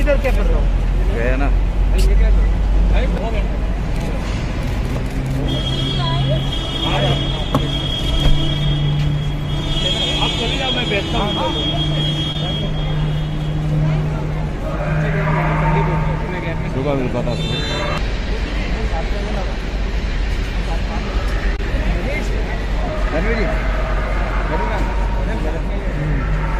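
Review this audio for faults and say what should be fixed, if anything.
Short concealed packet loss occurs twice, at 12.32–12.35 s and 21.56–21.59 s. About 20 ms of audio arrived too late each time, and the decoder extrapolated the preceding sound to fill the gap, leaving a brief smear. A larger jitter buffer or forward error correction would prevent this.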